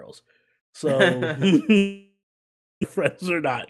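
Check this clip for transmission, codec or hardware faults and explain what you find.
There are three faults here, all from 0.6 s onward.

From 0.6 s to the end you get automatic gain rising. The AGC decided the input was too quiet and kept turning its gain up, so the voice and the background noise swell together slowly rather than jumping.

Between 1.77 s and 2.85 s there's what's likely a long network dropout. The last sound is stretched into a fading buzz for a bit, then roughly 0.64 s of near silence. When the audio resumes, about 0.6 s of speech is simply gone.

From 2.97 s to 3.42 s there's a jitter buffer speed-up. The buffer was holding more audio than it aims for, so the receiver clipped out tiny pitch-period chunks, about 40 ms in total. Speech runs about 7% fast at unchanged pitch and sounds a little rushed.

The Opus call path itself is working normally, and its top end sits around 12 kHz.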